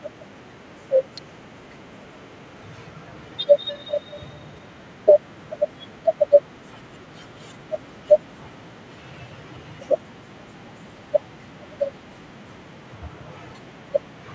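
Speech with two faults. At 1.18 s a sharp snap sits on top of the sound, an electrical switching spike likely from a nearby switch or discharge, unlike a dropout, which would remove sound rather than add it. From 1.92 to 4.98 s a feedback echo between two devices brings each phrase back at a fixed interval of about a fifth of a second, thinner and more ringing each time. It peaks about 29 dB below the speech. The steady, ringing repeats mark it as a loop between devices, not room reverberation. The call microphone processing's band tops out at 8 kHz.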